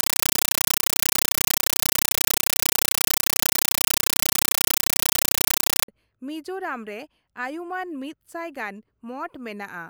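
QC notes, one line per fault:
0.00 to 5.88 s, compressed stream played as audio: instead of the speech you get a very loud chattering static, a rapid rattle at about 31 bursts a second. What's happening is that a Dolby Digital (AC-3) bitstream is being fed to the output as if it were ordinary samples. Each coded frame comes out as roughly 8 ms of harsh noise followed by silent padding. The density fits something like a 384 kbps stream.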